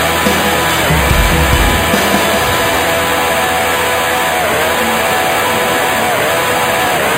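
A bright metallic fizz sits on the sound for the whole clip. Its level follows the sound, about 13 dB below it. This is imaging from sample-and-hold upsampling. It fits 11 kHz audio raised to 44.1 kHz by repeating samples without filtering. The lowest mirror copy fills 5.5 to 11 kHz.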